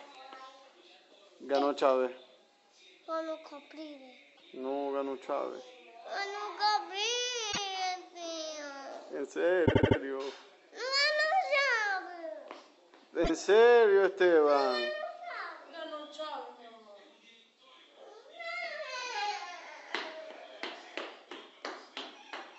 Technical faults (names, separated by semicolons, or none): repeated frames